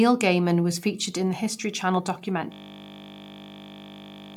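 At 2.52 s the speech freezes into a system hang loop that lasts to the end. The machine stalled while the audio hardware kept replaying one 20 ms buffer. That exact repetition, about 90 times over, sounds like a steady 50 Hz buzz.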